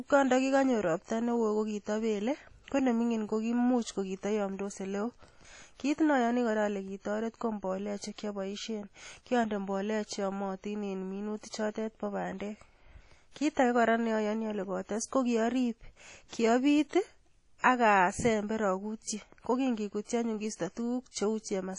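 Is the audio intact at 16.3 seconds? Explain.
No. From 16.28 to 16.33 s there is pre-echo: a short hiss about 42 ms long arrives just before a sharp speech attack, and the attack itself sounds softened and smeared. A transform codec spreads the quantisation noise of each block evenly across it, so noise sized for the loud onset also fills the quiet gap ahead of it. On a waveform, a thin fuzz rises before the onset. On a spectrogram, a broadband smear sits to the left of the attack.

That smear comes from the compression running through the whole clip, likely WMA compression at a low rate. The damage is plainly audible as a washy, ringing quality, with hiss that swells and fades with the speech. Long transform blocks spread the noise over tens of milliseconds, and weak spectral detail is dropped, which fits a bitrate around 32 kbps. A spectrogram shows a hard ceiling with nothing above 10.1 kHz, plus patchy gaps where quiet components were zeroed.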